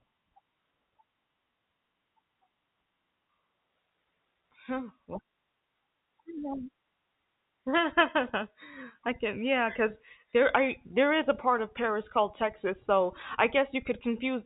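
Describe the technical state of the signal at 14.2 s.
At 14.2 s the speech is intact, carried through G.711 telephone coding with its usual 4 kHz ceiling and no fault present.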